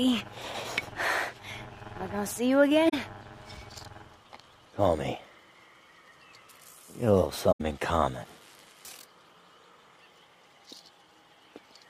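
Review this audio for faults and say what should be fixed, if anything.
AAC frame loss with muting occurs at 2.89 to 2.94 s and 7.51 to 7.61 s. The sound drops out for about 43 ms, then about 85 ms, consistent with two and then four lost frames of roughly 21 ms each. The decoder zeroes the missing spectrum, and the overlap-add windows fade the audio down into each gap and back up after it, leaving soft-edged silent holes. To prevent this, protect the transport with retransmission or forward error correction, and enable decoder concealment so lost frames are interpolated rather than muted.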